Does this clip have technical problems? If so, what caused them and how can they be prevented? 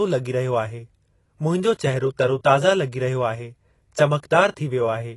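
Yes. AAC compression runs throughout the clip. Nothing is present above 11.5 kHz, and the speech sounds dull and smeared with plainly audible codec damage. This is likely AAC-LC at a low bitrate, consistent with about 32 kbps, where the encoder drops the top band and coarsely quantises what remains. Encoding at a higher bitrate, or keeping an uncompressed master for distribution, would prevent it.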